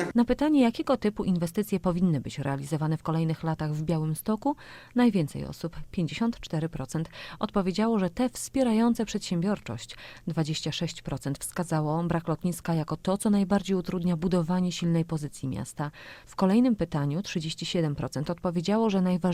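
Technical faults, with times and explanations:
No technical faults can be heard anywhere in the audio. There is no moment that calls for a time or an explanation.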